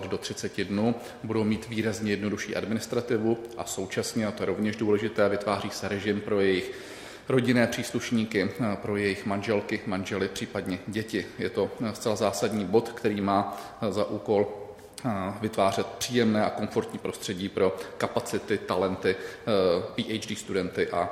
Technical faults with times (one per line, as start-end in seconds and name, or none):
none